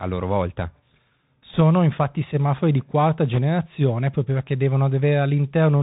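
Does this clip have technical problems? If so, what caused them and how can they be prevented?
Yes. Throughout the speech, the Bluetooth CVSD headset codec is plainly audible. Nothing above 4 kHz survives, s sounds turn scratchy, and a granular hiss sits under the speech. The one-bit delta modulator's adaptive step cannot keep up with loud, bright sounds, which fits a 64 kbps CVSD link. Prevention: use a wideband headset profile such as mSBC or LC3 instead of CVSD.

Bit errors on a Bluetooth voice link cause two short bursts of rushing, crackly noise, from 1.54 to 1.61 s just before "infatti semafori di quarta" and from 3.33 to 3.39 s just after it. The second burst is rougher, suggesting an error rate of a few percent against about one and a half. Because each CVSD bit carries little weight and errors decay, there are no loud clicks. Prevention: improve radio conditions by reducing distance, obstructions and 2.4 GHz interference.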